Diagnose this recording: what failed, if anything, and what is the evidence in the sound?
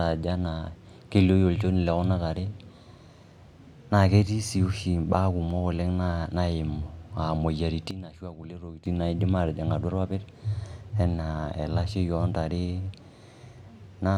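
Sudden gain jump from 7.91 to 8.86 s, ending before "naidim aatijing'": speech and background noise fall together by about 13 dB with no ramp, unlike AGC, likely a digital gain step.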